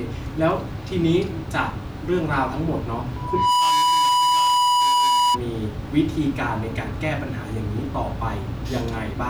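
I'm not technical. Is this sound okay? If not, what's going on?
No. From 3.16 to 5.39 s there is loudspeaker feedback squeal: the microphone hears its own speaker, so a 983 Hz tone swells up louder than the speech.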